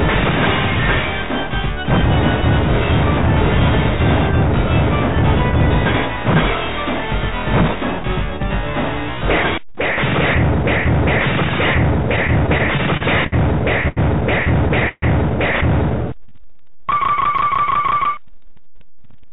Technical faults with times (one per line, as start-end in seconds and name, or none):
12.16-13.34 repeated stalls (stutter)
13.88-13.99 short stall from a late packet
14.89-15.04 call audio freeze
16.17-16.87 jitter buffer slow-down
18.72-19.28 jitter buffer speed-up